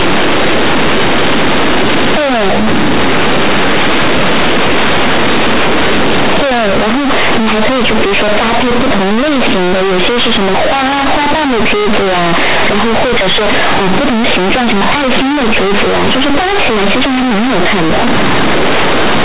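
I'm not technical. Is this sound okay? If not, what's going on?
No. This is companded audio read as linear: the telephone-style mu-law recording is played back without being decoded, so the speech sounds harsh, buzzy and far too loud from start to finish.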